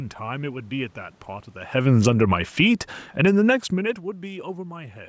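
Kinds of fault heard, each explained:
Automatic gain falling: the gain control pulls the level down by about 6 dB from 1.72 to 4.23 s, so the speech and the room noise sink together, a slow taper on the waveform.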